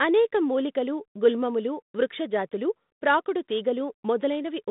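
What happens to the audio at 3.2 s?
At 3.2 s the speech carries on intact, with no fault at that moment, only the usual narrow telephone band of the 32 kbit/s G.726 path.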